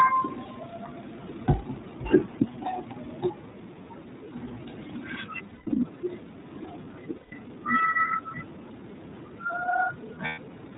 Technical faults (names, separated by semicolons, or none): iLBC codec; lost iLBC frames